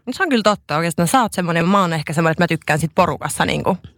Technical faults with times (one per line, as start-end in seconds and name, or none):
1.60 damaged data in a compressed stream